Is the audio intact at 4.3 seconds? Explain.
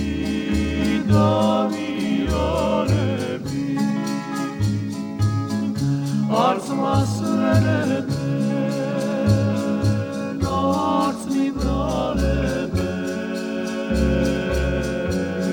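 Yes, at 4.3 seconds the audio is intact, with no dropout, click, distortion or other fault at that point.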